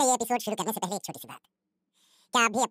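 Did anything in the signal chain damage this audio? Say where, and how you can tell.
Yes. At the sample-format stage, the audio was read two samples at a time (double speed): pairs of samples were taken as one frame, as if the data were stereo or twice as wide. Throughout, the speech runs at twice its speed, an octave higher.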